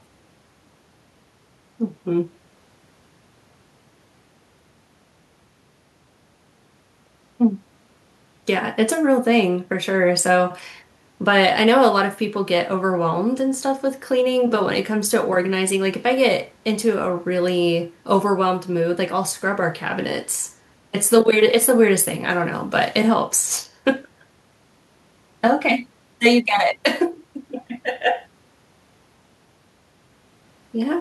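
Nothing in the speech stands out as a technical fault anywhere along the way, so there's nothing to point to here.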